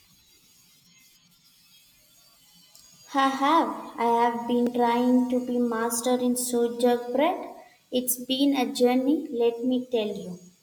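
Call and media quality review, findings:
Block of digital silence at 4.67 s, just before "trying to be master". Heard as a tick or dip. Gap about 0.94 ms, audio dropped straight to silence with no fade. Probable component: playback/render path; output buffer likely not filled in time.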